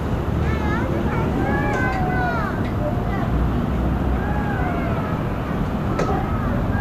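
No technical faults can be heard anywhere in the audio, and the signal stays intact and continuous throughout.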